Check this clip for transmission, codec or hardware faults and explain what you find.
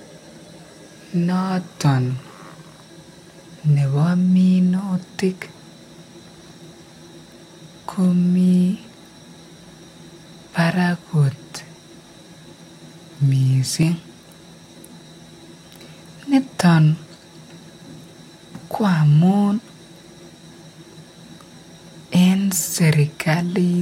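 One fault recurs through the speech: audio missing between chunks. At 1.85, 5.84, 9.83 and 13.83 s the sound jumps forward by a few milliseconds, with the two sides butted together and no gap of silence. The even spacing of about 4 s points to the likely cause: a processor working in 4-second chunks and losing a sliver each time it closes one chunk and opens the next.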